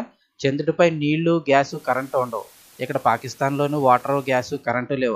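From 1.54 s to 4.71 s a hiss appears, about 30 dB under the sound, and the level drops about 2 dB, sliding in over 0.35 s. This is digital radio blending to analogue: digital reception failed, the receiver cross-faded to the station's FM broadcast, then returned.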